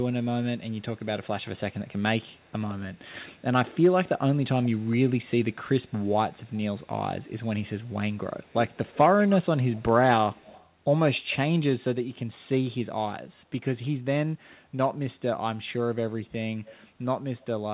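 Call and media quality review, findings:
Echo leak, 0.23–3.44 s, 4.62–4.88 s, 5.53–7.4 s, 8.91–10.7 s, 16.66–16.87 s: faint delayed copy of the talker, 158 ms lag at first, then 85 ms and 78 ms, from very faint to about 20 dB down. Likely the far-end canceller. A fixed lag, unlike diffuse room reverb.

Speech suppressed in double talk, 7.62–8.83 s: the talker ducks by about 25 dB in pieces, around a second in all, only while both sides speak. Likely the canceller's suppressor muting both. Tied to overlap, unlike packet-loss gaps. Band-limited to 4 kHz throughout, consistent with the G.711 A-law path.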